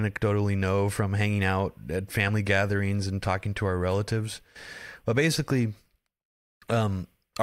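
No technical faults can be heard anywhere in this speech recording; the signal stays intact and continuous throughout.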